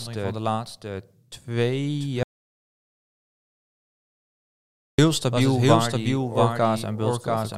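Throughout, a doubled audio track repeats the speech roughly 0.7 s late and about 5 dB quieter, likely from a second, slower capture path; the waveform shows a shifted duplicate. From 2.23 to 4.98 s, an audio dropout to silence erases 2.75 s of speech, likely from a lost input, leaving a flat line and an empty spectrogram.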